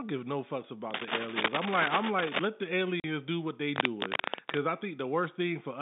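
A worn cable, connector or control was likely being moved from 0.90 to 2.45 s, just after "give no fucks": its contact resistance jumped about erratically, injecting cable scratch noise. Dense, uneven crackle and rustle sits over the speech at roughly the same loudness as the voice, so the two compete for that stretch within the narrow telephone band.

At 3.00 s a packet loss filled with silence follows. Audio packets never reached the receiver, which inserted 40 ms of nothing in their place. That length fits two lost 20 ms packets. The gap falls just before "do what they", with abrupt edges where the sound stops and restarts.

The same scratch returns from 3.76 to 4.58 s, straight after "do what they". Again the contact is likely disturbed, and bursts of rough, scraping noise at about speech level ride over the sound until the movement stops.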